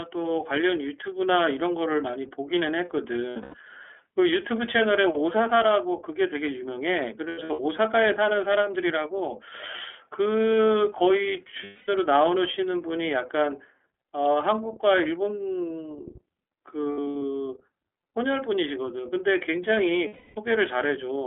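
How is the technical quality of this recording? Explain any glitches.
The quality is limited: narrowband codec coloration throughout, plus five brief dropouts.

iLBC codec, throughout: independently coded 30 ms frames, with the speech confined to 300 Hz to 3.4 kHz, sound slightly rough and synthetic. A spectrogram shows nothing above 3.4 kHz.

Lost iLBC frames at 3.3 to 3.55 s, 7.29 to 7.6 s, 11.64 to 11.89 s, 16.92 to 17.22 s and 20.07 to 20.38 s: the decoder repeats the last pitch cycle with added noise, producing buzzy held vowels. The losses add up to 180 to 300 ms per event. The first, second and fourth are scattered, with runs of at most about a tenth of a second. In the waveform these appear as smooth, repetitive, fading cycles, and normal sound returns almost immediately after each one.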